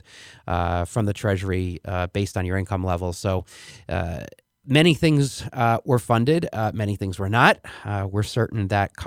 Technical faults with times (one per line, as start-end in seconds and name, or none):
none